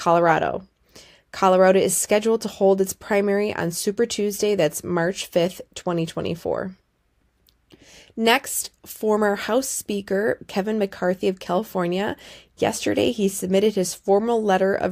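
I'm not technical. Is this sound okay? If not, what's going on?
No. From 0.22 s to 14.77 s there are clock slip clicks: faint, steady ticks roughly every 0.15 seconds, about a hundred in all. They're likely caused by two devices running on separate, unsynchronised clocks, drifting roughly 150 parts per million apart and dropping or repeating a single sample each time.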